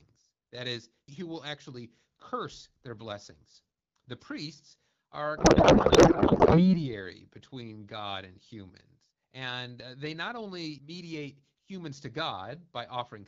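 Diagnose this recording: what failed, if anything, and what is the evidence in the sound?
Just after "priests are", from 5.37 to 6.83 s, speech collapses into garbled warbling noise: a codec payload misread, with octet-aligned AMR frames unpacked as bandwidth-efficient.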